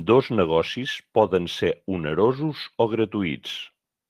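A short bit of speech with nothing technically wrong to point out anywhere in it.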